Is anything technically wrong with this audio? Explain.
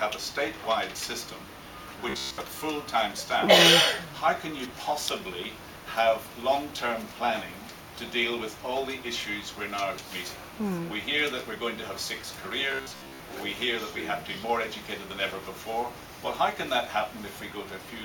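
Yes. From 2.10 to 2.41 s and again from 12.72 to 13.20 s, the sound turns into a rigid, metallic buzz pitched at about 66.7 Hz, still loosely tracing the underlying sound. This is robotic sound from repeated short buffers, likely caused by new audio arriving too seldom, so the playback fills the gaps by looping the last fragment. A 66.7 Hz buzz fits repeats of about 15 ms, and most of the real audio in those stretches is skipped.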